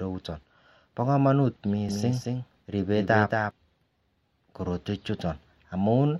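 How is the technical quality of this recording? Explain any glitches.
The recording has one glitch. From 1.89 to 3.51 s, a doubled audio track appears: a dry, full-band copy of the speech trails about a fifth of a second behind, roughly 5 dB quieter, starting and stopping abruptly. It is likely caused by a second, slower capture path mixed in.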